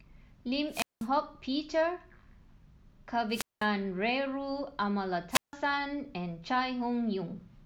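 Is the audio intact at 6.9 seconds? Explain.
Yes, at 6.9 seconds the speech plays through cleanly, with no dropout, click, distortion or other fault at that point.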